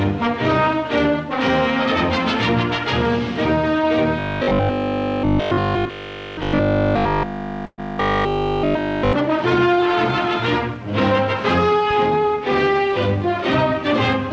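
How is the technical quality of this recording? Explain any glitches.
The recording has two faults. Both fall in the middle of the clip, and the second sits inside the first. Nothing is heard above 8 kHz, which fits a wideband call codec such as G.722.

From 4.19 to 9.13 s the sound turns robotic. It has a rigid, metallic buzz at 50 Hz. The likely cause is repeated short buffers. New audio arrived too slowly, so the software kept replaying the last stretch instead of fresh material. Practically all of this span is repeated. A 50 Hz buzz means each repeat lasts 20 ms. The loop stamps that fixed pitch on the sound, and the underlying content is only loosely followed.

From 7.66 to 7.80 s there is a burst of packet loss. About 120 ms of audio never arrived in time. The receiver covered about 118 ms by stretching the last sound and fading it down, so this part becomes a held, decaying tone or hiss. 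About 20 ms of the gap is silent. The audio then picks up further on, with the missing stretch gone.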